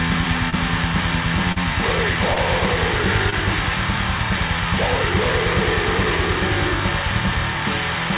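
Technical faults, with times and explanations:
0.50–0.54 s, 1.52–1.58 s, 2.34–2.38 s and 3.30–3.34 s: short concealed packet loss. Four small holes, about 20 ms each except the second, which is closer to 40 ms. Those bits of audio didn't reach the decoder in time, so the receiver extended the sound that came just before each gap and then blended back into the real signal. You hear each one as a quick smear or wobble, and the 1.52 s one is the longest. All of this sits on a telephone-band call path that has nothing above 4 kHz, which fits G.711 mu-law at 64 kbps.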